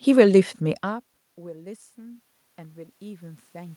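From 0.81 s to the end at 3.76 s there is automatic gain rising. Around half a second in, the talker moves away from the microphone and the input falls by about 24 dB. The gain control responds by turning its gain up slowly, so the level creeps upward instead of jumping. The room noise swells along with the speech, which sets this apart from a talker simply coming closer, where only the voice would grow louder.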